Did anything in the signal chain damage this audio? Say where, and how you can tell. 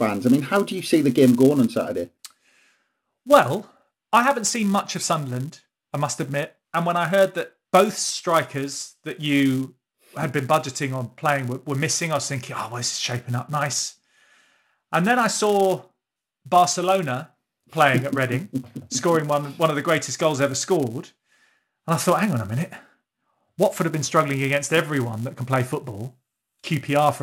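Yes. A filter restarted on every block, somewhere in the processing stage where audio is handled in fixed-size buffers, damages the whole speech clip. A buzz at 172 Hz sits under the speech from start to end, which fits a 256-sample block. The filter discards its memory at each block boundary and begins from silence, so every block opens with a small transient. Unlike mains hum, the buzz isn't at 50 or 60 Hz and rises and falls with the speech level.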